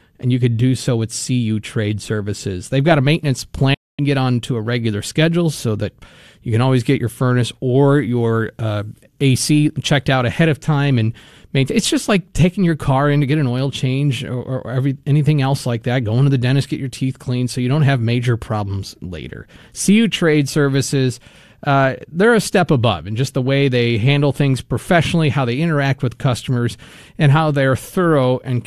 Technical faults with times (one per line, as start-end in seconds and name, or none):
3.74-3.99 digital broadcast dropout